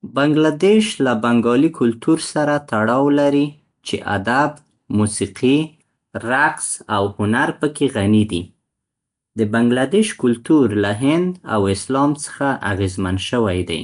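Nellymoser compression runs throughout this speech clip: a rough, hissy halo and smeared underwater quality, with nothing above 10.6 kHz, likely from coarse two-bit block coding, consistent with roughly 44 kbps.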